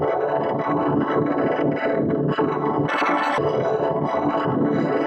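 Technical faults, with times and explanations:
2.88 to 3.38 s, audio read two samples at a time (double speed): for half a second the sound races at twice its speed and jumps a full 12 semitones higher, because the reader swallowed sample pairs as single frames and so skipped through the stream. Unlike a clean pitch shift or resampled speed-up, nothing filtered the upper frequencies before the effective sample rate halved.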